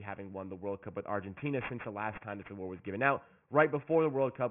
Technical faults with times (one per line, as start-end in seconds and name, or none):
0.00-4.50 aliasing